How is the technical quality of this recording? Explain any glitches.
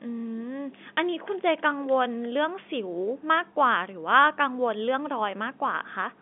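No glitches can be heard anywhere in this recording.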